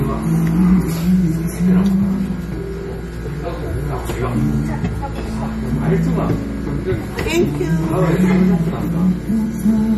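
From start to finish the audio has a watery, swirly quality, with plainly audible damage and nothing at all above about 14.9 kHz. That's likely MP3 compression working with too few bits, which fits a low bitrate around 40 kbps. Short of bits, the encoder chops the treble at a fixed point and drops weaker frequency lines, letting them flicker in and out between frames. Sharp onsets smear and bright detail turns chirpy and metallic.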